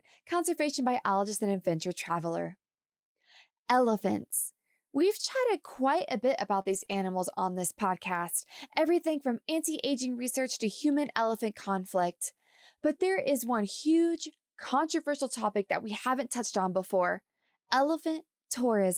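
Right after "chatted quite a bit", at 6.61 s, about 40 ms of the stream failed to reach the decoder in time, and the receiver covered the hole with short concealed packet loss, extending the preceding sound before blending back. A second concealment follows at 6.85 s, covering about 20 ms. Each is heard as a brief smear or wobble, and a short sound inside the hole can disappear.

Interleaved with these, lost packets were rebuilt from error correction. The packet following each loss carried a low-bitrate backup copy, and the decoder played that instead of leaving a gap. This happens from 6.65 to 6.83 s (about 100 ms, which fits five lost packets) and from 6.88 to 6.94 s (about 40 ms), just before "on this podcast everything". The result is a rougher, noisier stretch rather than silence. The same rough, grainy patch appears at 14.14 to 14.24 s (about 60 ms), between "there is one" and "controversial topic that we".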